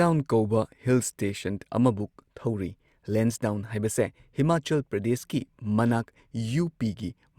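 Nothing is technically wrong with this speech recording.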